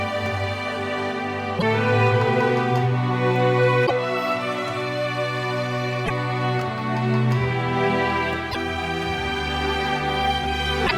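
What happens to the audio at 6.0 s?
There's a burst of damaged data in the compressed stream from about 6.02 to 6.10 s: the decoder loses sync on the bad frames, and you hear a short blip.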